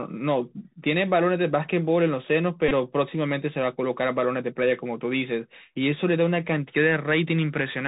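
A Bluetooth CVSD headset codec, consistent with a 64 kbps narrowband link, carries this speech throughout, cutting everything above 4 kHz and leaving scratchy s sounds over a granular hiss. A Bluetooth headset packet repeated from 2.69 to 2.72 s: lost packets were replaced by re-decoding the last good one, producing a brief buzz near 267 Hz over 22.5 ms, which fits six repeated 3.75 ms packets.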